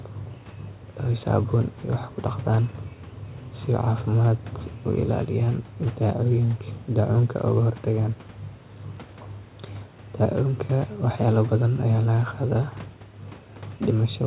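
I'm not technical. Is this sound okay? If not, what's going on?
Yes, this sound is okay.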